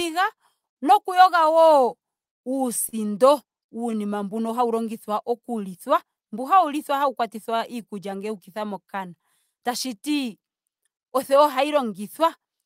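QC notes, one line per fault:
Throughout: clock drift between sender and receiver. The sender's audio clock runs about 2 percent slower than the receiver's, so the jitter buffer steadily drains. The receiver compensates by repeating short slices of the speech to make up for samples that arrive too slowly. Those repairs are not evenly spaced, so the timing feels faintly uneven across the clip rather than clean and steady.
0.06–1.98 s and 3.91–12.40 s: repeated timing corrections. To keep pace with the slow sender, the receiver keeps inserting tiny repeated pieces, running the speech at about 98 percent of its natural rate. The first stretch gains around 50 ms and the second around 200 ms. Each insertion is small and all push the same way, so they come across as brief hiccups and a slightly dragging, unsteady tempo rather than obvious glitches.
2.89–2.95 s: short stall from a late packet. 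A packet missed its playout slot, the jitter buffer ran empty, and the receiver filled 38 ms by holding the last sound until the data arrived, then resumed from the same point with nothing lost. The result is a sound sustained unnaturally long with a slight buzzy or dipping quality, and playout delay rises by 38 ms from there.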